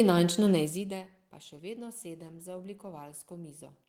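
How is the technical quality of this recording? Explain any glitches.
No glitches in this recording.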